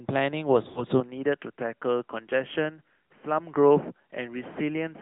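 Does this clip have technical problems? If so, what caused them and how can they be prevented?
Yes. The AMR narrowband mobile codec runs through the whole clip: nothing passes above 4 kHz, and the voice has a buzzy, synthetic edge. That texture, beyond simple dullness, marks a speech model rather than a plain filter, and it fits a mid-rate mode near 10 kbps. Prevention: use a wideband or higher-rate codec.

From 0.68 to 0.84 s there are lost AMR speech frames. The sound is drawn out and fades rather than cutting abruptly, with about 80 ms gone, which fits four consecutive lost frames. The decoder's concealment stretching the last sound is what separates this from a simple gap. Prevention: improve radio coverage or add stronger error protection.

At 1.0 s the sound turns duller and boxier until the end. There is no silence at the change. The band now stops near 3.3 kHz, the level drops about 5 dB, and a faint new noise floor appears roughly 50 dB down. 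This was likely an input switched to a poorer device. Unlike the codec limit, it begins at a single moment and persists. Prevention: lock the input device before recording.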